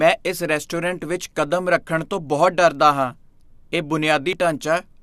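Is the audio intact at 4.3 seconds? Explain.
No. At 4.33 s the speech hits damaged data in the compressed stream: corrupted bytes make the decoder misread a frame and lose sync, producing a brief chirp, squawk, click or short hole. It appears as a thin vertical smear on a spectrogram and an abrupt glitch in the waveform.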